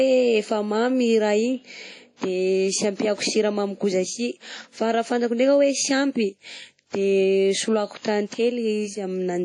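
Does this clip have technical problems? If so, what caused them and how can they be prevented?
Yes. Throughout, the speech rings and sounds washy, with hiss breathing alongside it and nothing above 10.1 kHz, pointing to likely WMA compression at a low bitrate, around 32 kbps. Encode at a higher bitrate or with a modern codec.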